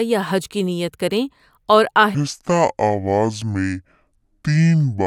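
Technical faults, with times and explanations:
2.15–5.06 s, section at the wrong speed: right after "کی نیت کریں اور", the speech drops to about 0.6 times its recorded speed and stays there to the end of the clip. Because speed and pitch are tied together, the voice falls by roughly ten semitones and stretches out, turning deep, slow and drawn. The abrupt change at 2.15 s is likely due to this stretch being played back or edited against the wrong clock rate.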